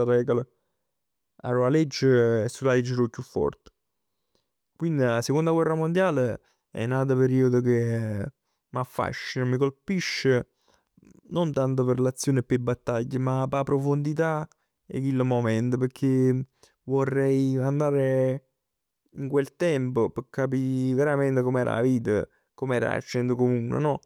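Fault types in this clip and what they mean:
No technical faults can be heard anywhere in this recording.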